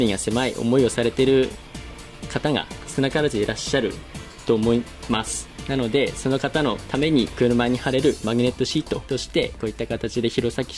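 No technical faults can be heard anywhere in the audio.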